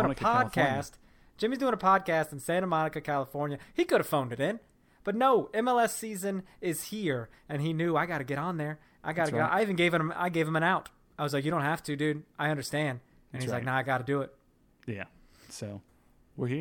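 Nothing stood out on listening to this speech recording.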